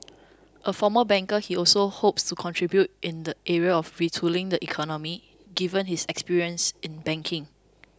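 Speech, with nothing technically wrong with it at any point.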